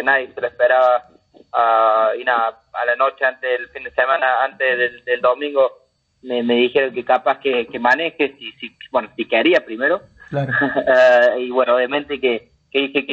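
No technical faults are audible anywhere in this audio.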